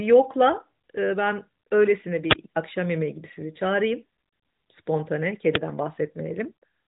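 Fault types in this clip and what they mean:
Uninitialised buffer: leftover memory played out as samples, heard as a brief loud digital-noise burst at 2.31–2.33 s, fitting a 1024-sample block, and a loud crack at 5.55 s, fitting 256 samples.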